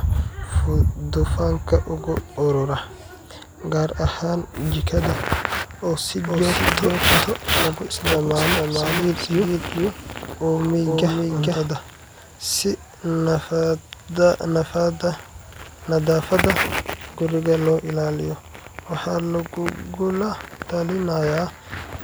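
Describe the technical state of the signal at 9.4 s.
Doubled audio track, 6.23 to 11.67 s: a second, equally loud copy of the speech trails about half a second behind, likely from a duplicated capture path.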